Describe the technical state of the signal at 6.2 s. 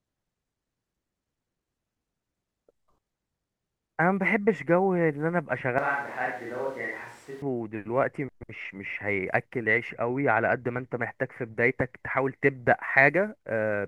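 A switch to a distant microphone spans 5.78 to 7.42 s, covering 6.2 s. The close feed has likely dropped out, leaving a farther pickup. The voice sounds abruptly hollow, roomy and bass-light, around 10 dB quieter, with room noise roughly 25 dB below it.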